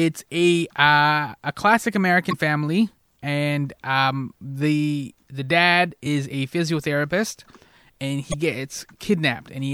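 A speech clip with three short glitches from damaged data in a compressed stream, at 2.29–2.33 s after "a classic", 6.02–6.07 s after "um the the dad", and 8.30–8.34 s. Each time the decoder hits bad bytes, loses frame sync and skips ahead to the next header.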